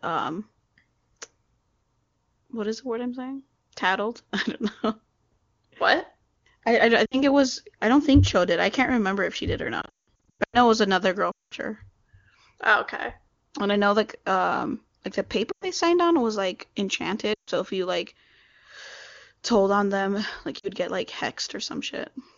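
Lost AMR speech frames crop up six times in this speech. At 7.05 to 7.22 s, about 60 ms goes missing and the decoder papers over it by repeating its last good pitch and vocal tract settings at falling gain, so the sound drops to near silence within two frames. The worst stretch runs from 9.81 to 10.58 s, between "if she did or" and "it was another girl". About half a second is lost in bursts spread over 720 ms, and the longest gap of 180 ms drops to near silence within two frames. Right after "it was another girl", 11.31 to 11.54 s drops about 200 ms and trails off the same way. Between "like um like the" and "signed on was like", 15.51 to 15.66 s loses about 100 ms. Then come further stumbles at 17.33 to 17.50 s and 20.59 to 20.69 s. On the HD Voice (AMR-WB) channel, each recovery comes back a touch thin or rough for a moment.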